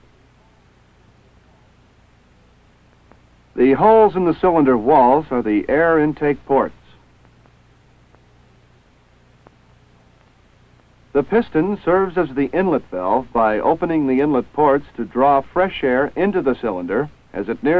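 No technical faults can be heard anywhere in it.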